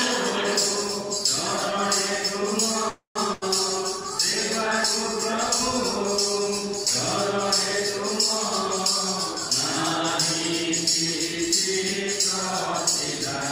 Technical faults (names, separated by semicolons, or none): call audio freeze; burst of packet loss